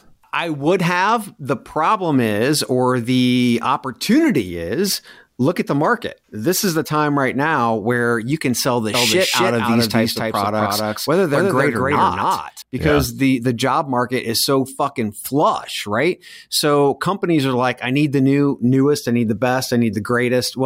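A slower second capture path likely adds a doubled audio track from 8.94 to 12.62 s, after "you can sell the": an equally loud copy roughly 300 ms behind, switching abruptly.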